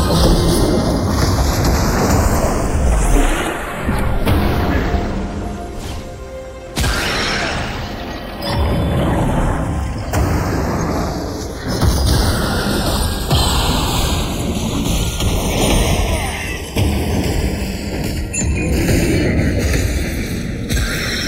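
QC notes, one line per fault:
Throughout: channels drifting apart. The two channels run on clocks that disagree by roughly 40 parts per million, so the inter-channel delay grows steadily to about half a millisecond by the end. Summed to mono, this produces a slow flanging sweep. A spectrogram shows comb notches gliding downward, the lowest settling near 1 kHz.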